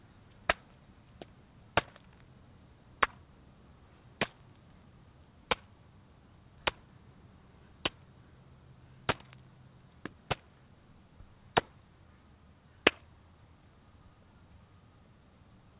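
No technical faults are audible.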